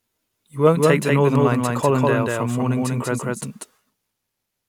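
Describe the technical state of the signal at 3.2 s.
At 3.2 s a doubled audio track runs, as it does throughout: a full-band copy at roughly equal level trails around 200 ms behind without room colour, likely from a second, slower capture path.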